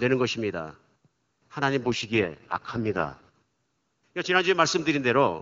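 From 1.83 s to 3.29 s there is an AMR rate drop. The network pushed the wideband codec down to its lowest mode to spend bits on error protection, and the roughness fits a fall from 23.85 to about 6.6 kbit/s. The speech turns raspy and synthetic, then clears. On a spectrogram the band edge holds near 7 kHz, but harmonics blur into grainy noise. The waveform shows no gap.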